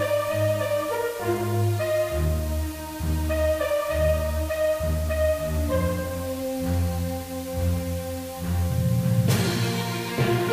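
Low bit depth with dither runs throughout: the signal is rounded to very few levels, which fits a 6-bit word, with dither added, leaving a steady, even hiss about 20 dB below the sound.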